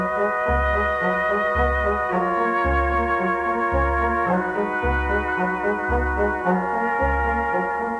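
No technical faults are audible.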